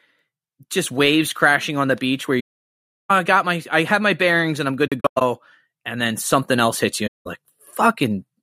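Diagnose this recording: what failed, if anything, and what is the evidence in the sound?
AAC frame loss with muting, at the codec stage. The speech drops out from 2.39 to 3.11 s, after "on the beach where". Shorter, broken gaps follow between 4.87 and 5.22 s, after "bearings and I'm good", and a shorter gap from 7.07 to 7.27 s. The decoder zeroed the missing frames, so overlapping windows fade each hole.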